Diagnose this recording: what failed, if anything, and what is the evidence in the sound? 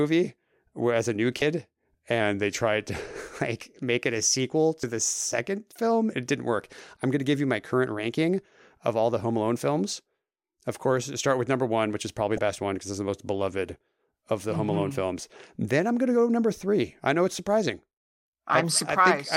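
Damaged data in a compressed stream, at the codec or storage stage: 34 ms, 32 ms and 34 ms glitches at 1.39 s after "as a new", 4.80 s after "make it a sequel", and 12.35 s after "one which is probably". Corrupt frames break decoder sync. Spectrograms show brief broadband smears, and waveforms show abrupt discontinuities.

A drift correction step at the buffer stage, likely clock-matching resampling, slows the speech by 5.3% and lowers pitch by about 94 cents, nearly a semitone, from 2.21 to 3.07 s, then snaps back. Spectrograms show harmonics stepping down together, and waveforms show periods lengthened.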